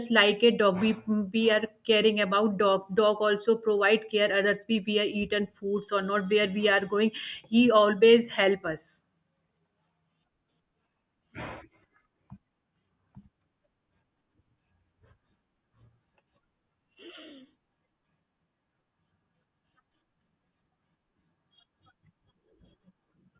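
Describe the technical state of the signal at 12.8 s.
At 12.8 s the signal is intact, with no audible fault at that moment.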